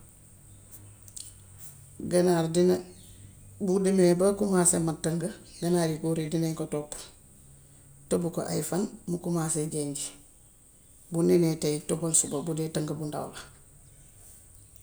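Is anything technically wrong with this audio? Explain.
No, nothing is technically wrong with this audio.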